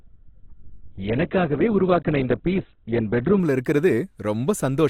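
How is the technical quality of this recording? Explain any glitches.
The first 3.4 seconds are noticeably degraded, then the quality jumps up cleanly. From 0.0 to 3.4 s this is an adaptive stream starting at a low bitrate: the player began on a cheap version of the stream to start quickly, then switched to a richer one once it had gauged the connection. Until the switch nothing is present above 4.4 kHz, so the speech sounds dull and band-limited with heavier codec artefacts, consistent with a very low-rate Opus encoding near 8 kbit/s. At 3.4 s the full treble returns abruptly, with no gap, which fits a step up to around 64 kbit/s.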